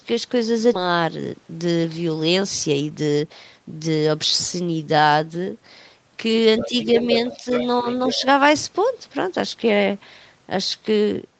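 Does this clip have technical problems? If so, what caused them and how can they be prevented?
Yes. At 0.73 to 0.75 s, a stretch of audio was dropped in transit or by an overflowing jitter buffer while later audio waited. This skip ahead loses roughly a second of speech, and the two sides are butted together with no fill. A larger buffer limit and steadier network delivery would prevent it.

From 2.44 to 4.02 s, the jitter buffer held more audio than its target and trimmed short pitch-period pieces repeatedly to cut the delay. This jitter buffer speed-up runs speech at 122% speed, same pitch, removing around 0.4 s, so it sounds hurried. Reducing delay bursts on the network would avoid it.

From 6.58 to 7.67 s and again from 7.86 to 8.23 s, a second voice comes through about 10 dB below the main talker. This is the other side's voice leaking through, likely an echo canceller failing to remove loudspeaker sound from the microphone. 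Using a headset would prevent it.

At 6.66 to 6.74 s, 7.34 to 7.47 s and 7.82 to 7.86 s, while the far side plays on the loudspeaker, the main speech briefly dips by about 5 dB. This is speech suppressed in double talk, likely the echo canceller turning down both voices when it could not separate them. A headset would prevent this too.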